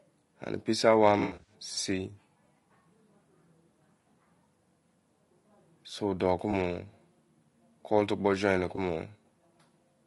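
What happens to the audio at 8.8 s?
From 8.75 to 8.78 s there is an AAC frame loss with concealment. A short smeared, noisy patch interrupts the speech. The gap fits a single lost frame of about 20 ms. The decoder filled it by reusing the last good spectrum with altered phase, so the sound blurs.

The same moment carries the low-delay AAC compression heard across the clip. The speech is rough and grainy, with noise between the harmonics and a thin top band. This likely comes from an AAC-ELD encoder at around 32 kbps, whose short frames resolve pitch poorly.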